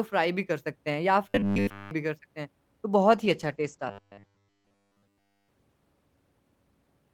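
From 1.29 to 1.91 s the speech collapses into a rigid metallic buzz near 100 Hz, still loosely tracking the words. This is robotic sound from repeated short buffers: nearly all of that stretch is likely a 10 ms slice replayed while fresh audio was skipped.

At 3.12 s the speech turns rough and muffled and stays that way to the end, with the highs gone above 8 kHz where they had reached 20 kHz. That matches a call bitrate drop from 48 to 12 kbps, bottoming out for about 1.2 s. Within it, from 3.89 to 5.49 s, the same 100 Hz robotic buzz returns. That stretch is again likely almost entirely repeated 10 ms buffers.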